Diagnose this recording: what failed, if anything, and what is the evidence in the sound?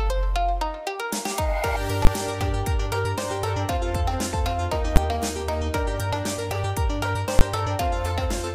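A processing stage produced invalid numbers at full scale: a calculation yielded infinite or undefined values, which were clamped to the maximum positive or negative level and held there for a whole block. This happens three times, at 2.05 to 2.07 s, at 4.96 s, and at 7.39 to 7.41 s, with blocks of 20 ms, 10 ms and 20 ms. Each block is so short that its onset and release merge into one sharp, very loud bang.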